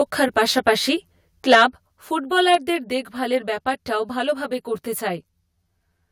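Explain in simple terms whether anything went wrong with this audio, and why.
A few things went wrong.

The whole clip has channel delay (comb filtering). One of the two channels arrives about a hundredth of a second late. When the two are mixed together, some tones cancel out at regular steps up the frequency range. That gives the speech a hollow, slightly phasey sound, as if it were heard through a tube. The effect lasts from start to finish.

There are two bursts of microphone overload, from 0.57 to 0.69 seconds and from 1.5 to 1.63 seconds. The loudest moments hit the limit of the microphone's converter. Their tops were sliced off. This is likely because the microphone input was set too high. The first burst is mild. The second is much stronger and gives a harsh, crackly edge.

The microphone volume was also stepped down three times, at 1.02, 1.55 and 2.55 seconds. Each time the level drops suddenly, voice and background together, by a modest amount. 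The drop at 1.55 seconds lands right in the middle of the second distorted burst. The likely cause is the calling software sensing a too-loud microphone and turning its input down in steps.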